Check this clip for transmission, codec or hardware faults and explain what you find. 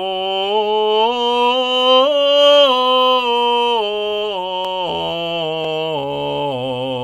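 No transmission, codec or hardware faults turn up in this music clip.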